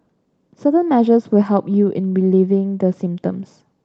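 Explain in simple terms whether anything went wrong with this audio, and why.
Nothing went wrong; the call carried this speech normally.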